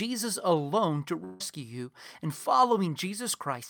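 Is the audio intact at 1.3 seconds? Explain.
No. A long network dropout runs from 1.24 to 1.53 s, between "alone to" and "you and". The gap likely comes from a stretch of audio that never arrived: about 150 ms of sound is missing, and the receiver papered over it by extending the last sound for about 156 ms as a fading buzz or hiss rather than true silence. When the audio resumes at "you and", the lost portion is simply gone, with about 3 ms trimmed at the rejoin.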